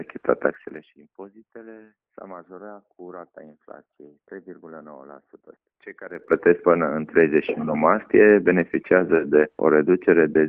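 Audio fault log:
0.44–0.96 s and 6.04–6.36 s, zipper noise: gain jumped in unsmoothed 3 dB steps, down then up roughly 20 dB, each step clicking into a fast ticking zip.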